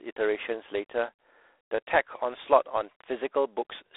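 From start to finish the speech goes through G.726 ADPCM, and the damage is plain: a harsh, rasping hiss that swells and fades with the talker's level, which fits the coarse 24 kbit/s mode. The band sits around 300 Hz to 3.6 kHz, with nothing above 3.8 kHz.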